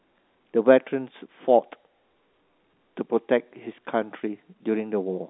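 No technical faults are audible.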